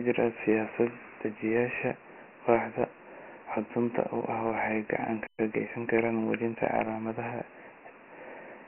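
Throughout, the speech carries Dialogic VOX ADPCM coding: a coarse 4-bit encoding at 24 kbps, with nothing above 3 kHz, which fits a 6,000-sample rate, and heavy gritty hiss trailing the speech. At 5.27 s the sound cuts out for about 120 ms, most likely a playback stall where the player ran short of data, before resuming at 5.39 s. From 5.39 to 6.57 s a time-compressed catch-up follows, trimming and cross-fading short segments so the speech runs at 1.1 times speed, hurried but at unchanged pitch.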